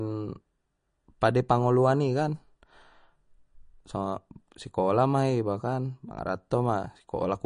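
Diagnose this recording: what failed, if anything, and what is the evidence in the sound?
MP3 compression damage runs through the whole speech clip, a codec-stage fault. Nothing sounds above 10.1 kHz, and sibilants turn watery and swirling. That points to a likely low bitrate near 40 kbps, where the encoder cuts treble and drops weak frequency lines frame to frame.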